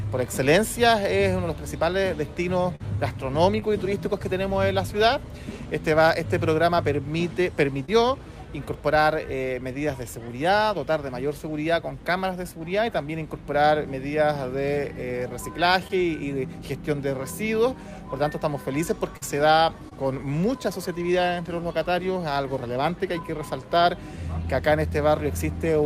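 A call with short concealed packet loss at 2.75, 3.60, 7.85, 15.88, 19.17 and 19.89 s: about 40 ms missing at 2.75 and 19.17 s, 20 ms elsewhere. The decoder papered over each gap by extending the preceding sound, so you get quick smears or wobbles.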